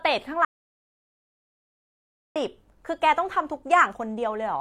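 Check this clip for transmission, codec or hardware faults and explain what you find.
One fault is present: an audio dropout to silence from 0.45 s to 2.36 s. The speech cuts off abruptly and the track falls to dead silence for about 1.91 s, with no room tone or background underneath, before the speech resumes mid-flow. That total absence of noise points to the input itself vanishing, likely a momentary disconnect, failed link or accidental mute, while the recorder kept writing silence. Whatever was said in that stretch is lost.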